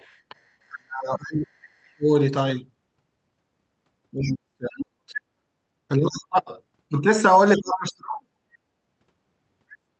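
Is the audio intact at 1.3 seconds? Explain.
No. Speech suppressed in double talk runs from 0.68 to 2.09 s. The speech dips by up to about 35 dB, likely because the echo canceller muted both overlapping talkers. Inside that span, from 1.23 to 1.32 s, the other side's voice leaks through as a brief scrap about 20 dB below the speech, likely loudspeaker echo the canceller missed.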